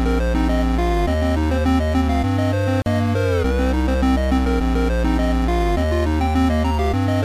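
At 2.82 s there's a gap at a join of encoded pieces: a gap of about 41 ms where separately encoded chunks meet, smeared edges, then the sound resumes.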